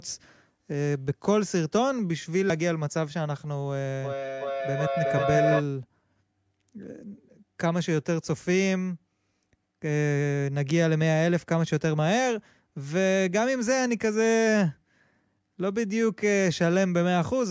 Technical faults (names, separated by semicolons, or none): feedback howl